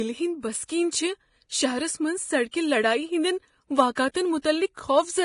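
Vorbis compression, likely, runs through the whole clip: the speech is hissy and grainy, with nothing above 10.6 kHz and coarse, noisy treble where fine detail should be. The codec has rebuilt the upper spectrum as quantised residue over a smooth floor, replacing detail with noise of similar energy. Voiced tones sound roughened and consonant attacks blurred. The damage is heavy, consistent with a low bitrate of around 30 kbps.

Pre-echo occurs at 0.64 to 0.69 s (about 54 ms), 2.51 to 2.53 s, 3.95 to 3.97 s, 4.42 to 4.44 s and 4.76 s. At each, a short hiss precedes a sharp onset. The codec spread its quantisation noise evenly across a transform block, so noise scaled for the loud attack leaked into the quiet moment before it. The onsets sound softened and smeared.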